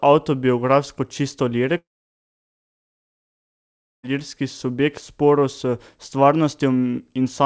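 From 1.78 s to 4.05 s a long network dropout is the likely cause. The last sound smears into a brief fading buzz, then about 2.2 s of silence, and speech resumes with 2.26 s lost. The waveform shows a flat gap, and the spectrogram a blank column.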